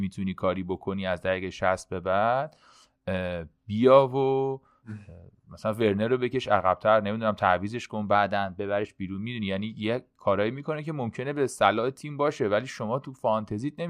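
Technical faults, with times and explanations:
8.15–8.84 s, drift correction step: the speech jumps about 5.7% faster and rises nearly a semitone (96 cents), then snaps straight back. Speed and pitch shifting together points to clock-matching software that likely stepped the playback rate to rebalance its buffer.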